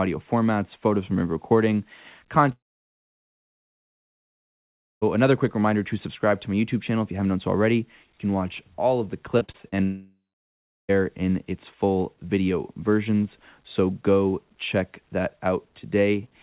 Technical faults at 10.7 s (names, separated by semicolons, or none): long network dropout